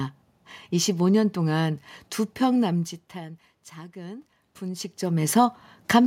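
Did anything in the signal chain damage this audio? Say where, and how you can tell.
Yes. The call-processing stage's automatic gain control rose from 3.13 s to 4.93 s. The input had dropped by about 19 dB, around where the talker moves away near 2.5 s, and the control responded by slowly raising its gain by about 4 dB. You can tell it is automatic gain rising because the room noise swells along with the speech over that nearly two-second span, which a talker's movement alone would not cause.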